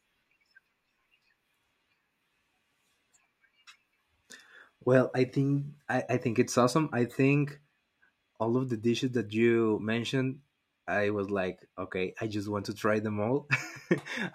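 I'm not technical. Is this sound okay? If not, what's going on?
Yes, the recording is technically sound, with no faults in how the signal was captured, stored or played back.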